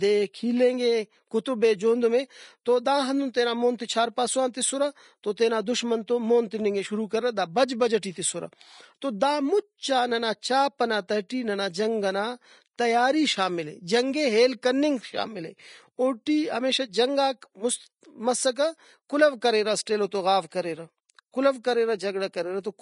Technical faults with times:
0.00-22.82 Vorbis compression
11.29 pre-echo

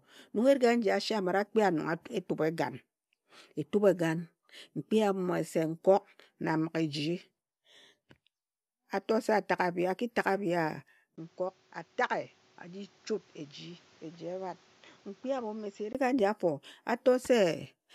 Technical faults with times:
11.16-15.95 input switched to a poorer device

